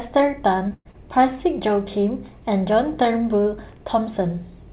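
Speech heard through a narrowband call path, with nothing above 4 kHz, which fits G.711 mu-law. Two short concealed packet losses occur, at 0.68 to 0.73 s and 0.91 to 0.96 s. Each replaces about 30 ms of missing audio with a smeared continuation of the preceding sound. Between them, from 0.73 to 0.88 s, a burst of packet loss drops about 120 ms. The receiver stretches the last sound as it fades, then leaves about 40 ms of silence before the speech resumes further on.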